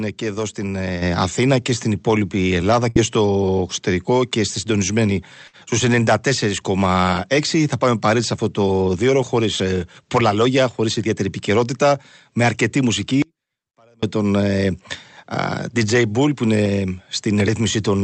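At 1.02 s, just after "και εδώ στην", the voice and background jump up together by about 7 dB. The microphone volume stepped up in a single move when the call software raised the input gain.

At 2.89 s and again at 5.47 s, after "εξωτερικό και στη συντονισμένη", the sound briefly smears into a held, fading tail for about 60 ms, then resumes with roughly 60 ms skipped. Each is a burst of packet loss: the receiver stretched and faded the last audio to cover the gap.

From 13.22 to 14.03 s, right after "ιδιαίτερη επικαιρότητα με αρκετή", the voice cuts out abruptly for about 0.8 s. Only a faint residue remains, around 35 dB below normal level, before it snaps back. This audio dropout to a faint residue is likely a loss of the wanted signal while the path after the break stayed live.

All of this passes through an Opus call path whose audio is band-limited to about 8 kHz.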